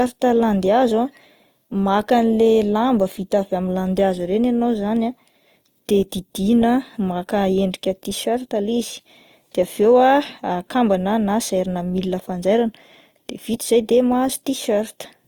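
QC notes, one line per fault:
Throughout: Opus compression, likely. The speech sounds grainy and rough, with a noisy texture where tones should be clean. The damage is plainly audible. Starved bands are filled with folded or noise content, which fits music-mode coding at around 24 kbps. Bandwidth stays full, reaching 20.2 kHz.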